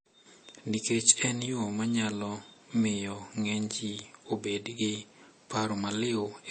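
Throughout, the speech sounds watery and swirly, with nothing above 8.4 kHz. The likely cause is MP3 compression starved of bits, which fits roughly 32 kbps.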